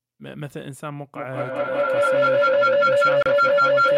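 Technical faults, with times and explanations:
1.16 s to the end, feedback howl: a second device in the room is feeding the call back into itself, and each trip through the loop comes back louder. It narrows to a tone around 1.5 kHz, with the loop coming round roughly every fifth of a second, and peaks about 15 dB above the speech.
3.23 to 3.26 s, Bluetooth stall: the sound drops out to 32 ms of silence, then carries on. That's likely the headphones' buffer running dry while interference held up packets, so playback paused until the resent audio turned up.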